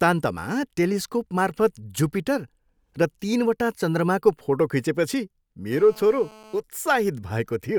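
From 5.72 s to 6.60 s the speech carries GSM phone buzz, a hard, raspy tone at about 217 Hz, roughly 24 dB below the speech. A nearby 2G handset on a call pulses its transmitter about 217 times a second, and the audio circuitry rectifies those radio bursts. Unlike mains hum, which is a smoother tone at 50 or 60 Hz, this buzz is sharply pulsed and rich in harmonics, and it holds steady throughout the burst.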